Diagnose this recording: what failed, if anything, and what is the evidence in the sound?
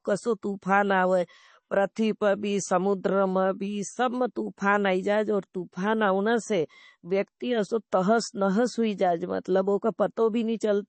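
The codec stage failed: the speech carries plainly audible coding damage for its whole length, most likely MP3 compression. Nothing reaches above 8.3 kHz, so sibilants lose their top and sound dull and lispy. Quieter spectral detail flickers in and out between frames, giving a watery, swirling texture, and consonant onsets are smeared. A hard treble cut this low, with damage this heavy, fits a starved bitrate of around 32 kbps.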